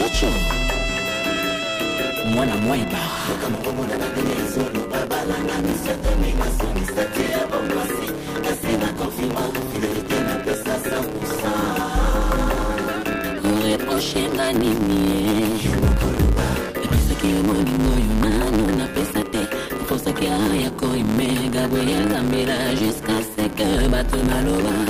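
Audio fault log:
throughout, block size mismatch (truncated): one stage writes longer blocks than the next reads, which fits 512-sample writes, so each block's tail is discarded. The regular cuts produce a 109 Hz buzz, and the audio runs 1.16 times fast at about normal pitch.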